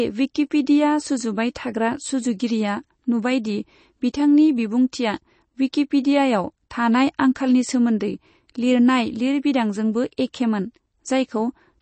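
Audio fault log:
throughout MP3 compression: the signal was likely starved of bits in MP3 encoding, in a way that fits a rate around 32 kbps. Weak frequency lines drop in and out between frames and the band is cut off, leaving plainly audible codec damage in the speech and nothing above 8.3 kHz.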